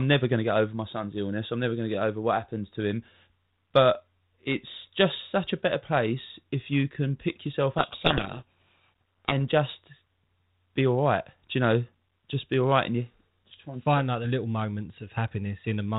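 A codec payload misread runs from 7.78 to 9.32 s. The decoder unpacks each G.726 code word with its bits in the wrong order, so every prediction step is wrong and the speech sinks under harsh, rasping distortion until the packing agrees again.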